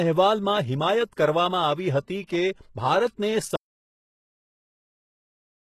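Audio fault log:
Throughout: HE-AAC compression, likely the cause of the heavy codec damage heard across the whole clip. Only the lower band is truly coded. The upper range is rebuilt by copying lower bands upward and fitting them to a coarse envelope, so its harmonics do not match the speech beneath. The result is gritty, metallic sibilance and a top that stops at about 12.3 kHz. This fits a very low bitrate, around 16 kbps.
2.23 to 2.29 s: pre-echo lasting 57 ms. A sharp onset falls late in a transform block, and the codec spreads that block's quantisation noise evenly across it. Noise sized for the loud attack therefore also fills the quiet stretch just before it. This is heard as a brief hiss leading into the attack, and the attack itself sounds blurred and softened rather than crisp.
3.56 s to the end: audio dropout to silence. The sound cuts out mid-flow and never returns. The gap holds no room tone at all, only dead silence, which points to the input being lost while the recording carried on writing empty audio. 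The likely cause is a disconnected device, a failed link or an unintended mute. Whatever was spoken over those final two seconds is gone.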